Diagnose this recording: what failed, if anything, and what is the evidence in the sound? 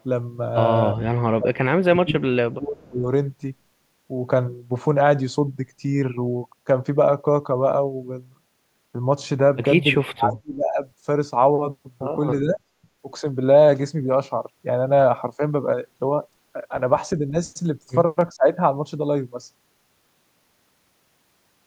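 Call processing failed. The speech repeatedly ducks, then recovers. Dips occur at 0.93 to 1.0, 1.37 to 3.04, 9.95 to 10.83, 12.41 to 12.61, 15.37 to 15.41 and 18.36 to 18.48 seconds. The deepest, near 10 s, falls by about 40 dB. The one at 15.4 s is slight, about 5 dB. This is likely speech suppressed in double talk. The echo canceller mistook the talker for loudspeaker echo while the far end spoke, and turned both down.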